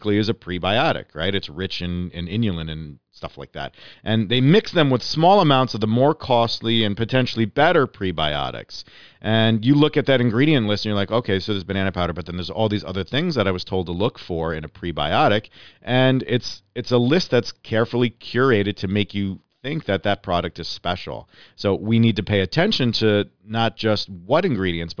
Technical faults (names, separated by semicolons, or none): none